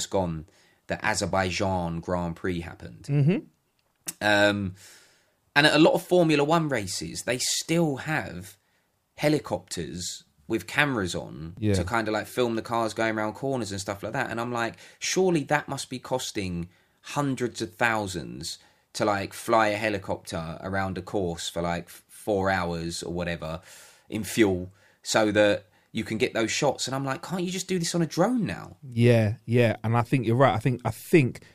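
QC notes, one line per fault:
No faults found in the speech; nothing to log.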